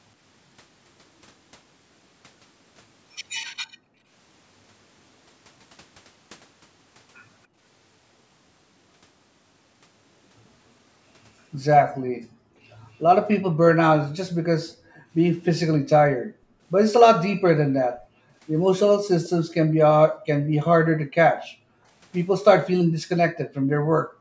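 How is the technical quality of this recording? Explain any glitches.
The recording has two kinds of fault: repeated gating of the background by an echo canceller, and one brief echo leak.

Background gated by the echo canceller occurs at 3.63–4.11 s, 7.47–7.6 s, 12.1–12.22 s, 14.62–18.32 s and from 20.11 s to the end. While far-end audio plays, the canceller clamps the microphone, so the room noise sinks by about 40 dB (about 26 dB at 7.47 s) and then returns. Within the two long spans, roughly 1.5 s and 2 s are affected. Unlike a dropout or packet loss, it is the room sound that dips and then comes back.

The echo leak at 19.24–19.29 s is a faint, delayed copy of speech. It arrives 288 ms late, about 25 dB below the main speech, and lasts only a scrap. It is likely the residue a loudspeaker-side echo canceller failed to remove and sent back. Room reverberation would smear directly off the original sound, but this copy trails behind it by a fixed, clearly separate gap. 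The call's microphone processing is audible too, with nothing above 8 kHz.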